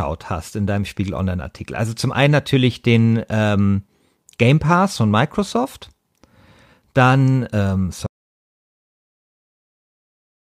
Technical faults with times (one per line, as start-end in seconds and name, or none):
8.06-10.44 audio dropout to silence